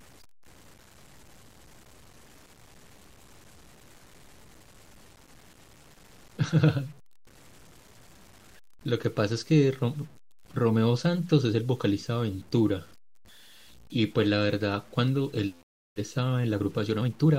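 Throughout the speech runs low bit depth without dither, likely truncation to about 8 bits. A grainy distortion roughly 30 dB down follows the signal, and quiet tails sputter. The waveform shows stair-steps, and the spectrogram shows broadband grit tracking the speech.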